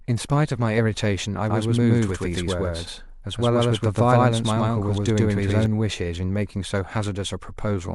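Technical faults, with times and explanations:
1.5–5.66 s, doubled audio track: Most likely a second capture path or an out-of-step edit fed the same speech into the mix twice. A full-band copy trails the original by roughly a tenth of a second at nearly equal loudness, so each syllable is followed by a flat, dry repeat with no decay or room colour, like a slapback echo. The copy appears abruptly at 1.5 s and cuts off just as suddenly at 5.66 s.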